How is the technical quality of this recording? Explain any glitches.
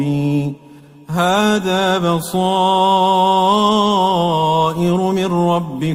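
No glitches or faults heard.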